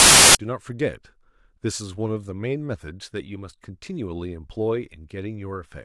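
A speech clip that opens with a hard-edged burst of very loud white noise from 0.0 to 0.35 s: file tags played as audio, an embedded cover picture's compressed data read as samples.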